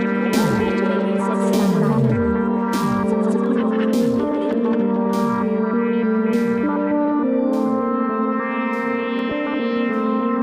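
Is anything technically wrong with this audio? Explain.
Yes, there are three sharp clicks, at 3.46 s, 4.53 s and 9.19 s. Each is a single tick with a thin vertical line across the spectrum at that instant. They're likely dropped samples: a tiny run of the stream, a fraction of a millisecond, goes missing, so the waveform jumps straight from one value to a later one. That step is too brief to remove any audible sound, but the sudden discontinuity sprays energy across the whole band as a click.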